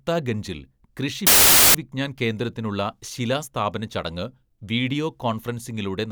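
A speech recording with one nasty interruption: from 1.27 to 1.75 s, roughly half a second, the voice is swamped by a burst of very loud white noise that switches on and off with hard edges. That's file tags played as audio. An embedded cover picture, which is compressed data, got read as if it were sample values. Because compressed bytes look essentially random, they come out as loud, flat static rather than anything tonal.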